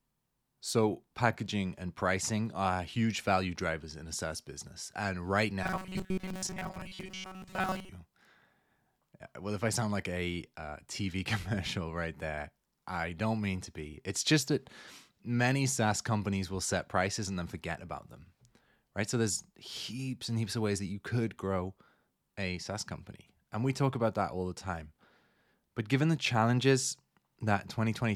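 Robotic sound from repeated short buffers runs from 5.63 to 7.89 s. The speech becomes a rigid metallic buzz near 188 Hz, with most of the passage made of repeats. The likely cause is audio arriving too seldom, so a slice of about 5.3 ms was looped in its place.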